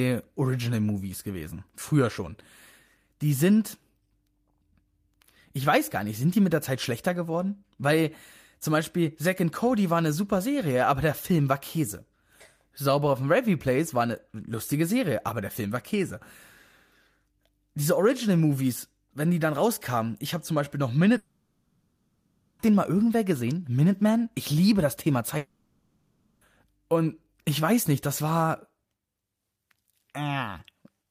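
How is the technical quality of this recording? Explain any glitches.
The speech is interrupted twice by what sounds like a long network dropout. From 21.17 to 22.61 s and again from 25.37 to 26.43 s, the stream likely stopped delivering audio for about 1.4 s and 1.0 s. The receiver filled each hole by extending the last sound it had, so instead of speech you hear a smeared, fading buzz-like continuation across the whole gap. The lost speech never returns; the talk resumes further along.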